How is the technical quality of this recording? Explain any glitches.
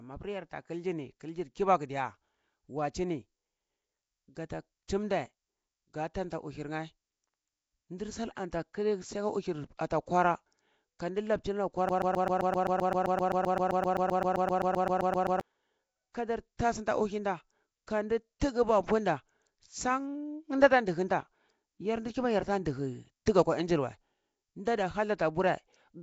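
The recording is poor: the speech carries codec damage throughout, and a stretch in the middle is lost to a repeating loop.

Throughout, the speech was likely squeezed through Nellymoser compression, the old Flash microphone codec, at a rate pointing to around 32 kbps. Bands it can't afford are filled with noise, leaving a rough, hissy, underwater smear, with nothing above 7.7 kHz.

From 11.89 to 15.41 s, a broken-record loop: the stream likely stalled and kept replaying the last fragment it held. A 130 ms slice repeats back to back roughly 27 times, and whatever should have played then is gone.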